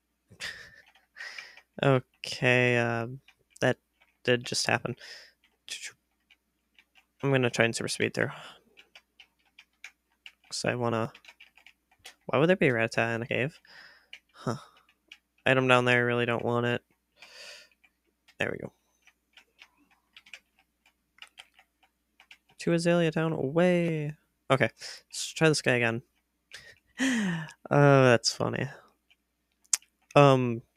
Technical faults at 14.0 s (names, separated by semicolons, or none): sound cut by the noise suppressor